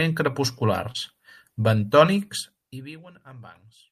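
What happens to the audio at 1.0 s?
Just before 1.0 s, from 0.91 to 0.97 s, there is short concealed packet loss. About 40 ms of the speech signal arrived too late or not at all, and the receiver's concealment synthesised roughly 31 ms to bridge the hole by extending the preceding sound, pitch-based where voiced and shaped noise where not, before cross-fading back into the real signal. It is heard as a brief smear or wobble, and any short consonant in that window may be lost.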